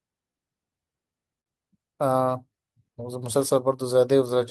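A speech recording carrying clock drift between sender and receiver for its whole length. The sending clock runs roughly 5 percent slow relative to the receiving end, so the jitter buffer is never topped up quite fast enough and keeps edging toward empty. That mismatch leaves the timing of the speech faintly unsettled from start to finish, with small hiccups arriving at irregular spacing rather than on any steady beat.

The receiver's response is heard as repeated timing corrections from 0.32 s to 4.35 s. To cover for the slow sender it keeps inserting short repeated pieces, all in the same stretching direction, and the result plays at about 97 percent speed. Across that span the additions add up to something like 150 ms of extra material. Each insertion is small, so the effect comes across as a slightly dragging, uneven tempo with the odd tiny stutter rather than as obvious glitches.

A short stall from a late packet sits between 1.41 s and 1.48 s. 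A packet missed its playout time and the buffer briefly ran dry, so the receiver held the preceding sound for 52 ms until the data turned up, then resumed from the same point. Nothing is lost, but that moment is drawn out, with a faint buzzy or dipped quality, and playback runs 52 ms later from there on.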